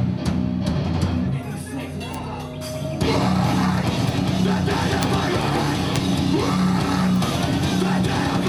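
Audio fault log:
2.14, 4.09, 5.03, 5.96 and 7.16 s: bit error spikes. Flipped bits throw one to a few samples to a power-of-two value and back, giving sharp broadband ticks unrelated to the sound, loudest at 5.03 and 5.96 s (about -2 dBFS) and faintest at 4.09 and 7.16 s (about -14 dBFS).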